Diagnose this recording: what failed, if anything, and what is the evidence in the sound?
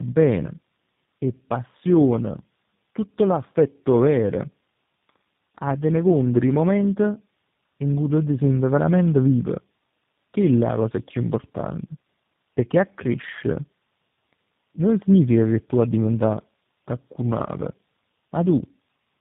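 Tandem speech coding throughout, at the codec stage: rough, warbly speech with nothing above 3.8 kHz, consistent with three speech coders in series, each re-encoding the previous one's damage.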